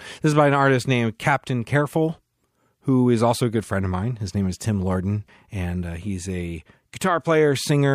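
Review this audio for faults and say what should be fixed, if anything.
Nothing to fix in the speech recording; no faults found.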